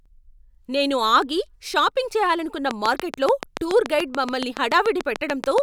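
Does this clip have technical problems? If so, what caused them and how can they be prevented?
Yes: a train of clicks runs from 2.71 to 5.59 s, starting after "నేను ఆగి షాపింగ్ చేయాలనుకున్న". About twenty near-identical pulses tick at a regular 7 per second, peaking about 15 dB above the speech, most likely from nearby electrical interference or a faulty connection or power supply. Keeping equipment apart and using a stable interface prevents it.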